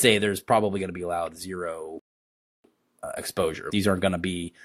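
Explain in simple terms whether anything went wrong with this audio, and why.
At 1.99 s the speech freezes into silence until 2.64 s, a rebuffering stall: the player ran out of audio. Unlike a dropout, it resumes exactly where it stopped.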